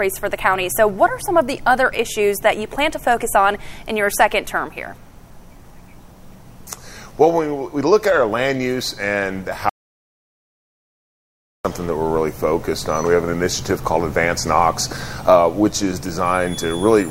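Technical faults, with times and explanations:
9.69 to 11.65 s, audio dropout to silence: input likely lost while zeros kept being written, so sound cuts to 1.95 s of total silence, no room tone, then resumes mid-flow.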